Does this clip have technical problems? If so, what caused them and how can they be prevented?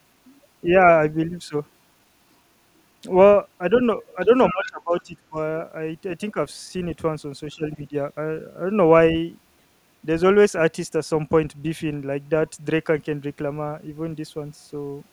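Yes. The other side's voice leaks through at 4.02–4.15 s, faintly, and more clearly at 4.51–4.67 s. It is likely loudspeaker echo the echo canceller left behind. Prevention: use a headset, or tune the canceller so it converges faster.

Speech is also suppressed in double talk at 4.26–4.30 s, 4.51–5.37 s, 6.31–6.37 s and 7.53–7.94 s. The voice drops by a few decibels at the short spots and by roughly 15 to 20 dB at the longer ones. This is likely the canceller ducking both sides while they overlap. Prevention: use a canceller with better double-talk detection, or avoid speaking over each other.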